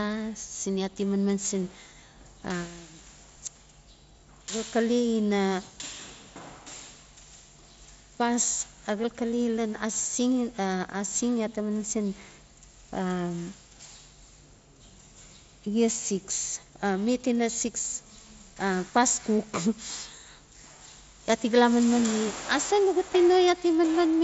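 No technical faults can be heard in this speech.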